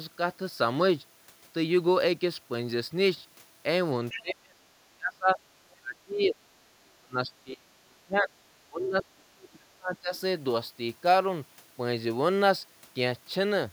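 Other side's voice leaking through appears at 4.1 to 4.21 s: a brief scrap of a second voice about 15 dB below the talker. The likely cause is loudspeaker playback reaching the microphone that the echo canceller failed to fully remove.

Speech suppressed in double talk follows at 4.2 to 4.61 s, 4.93 to 6.37 s, 6.74 to 7.69 s, 7.85 to 8.35 s and 8.66 to 10.13 s. The talker's voice sinks by roughly 30 to 35 dB at its deepest, likely because the canceller mistook overlapping speech for echo and turned everything down.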